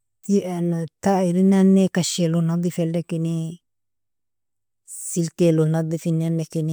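No technical faults can be heard anywhere in this speech.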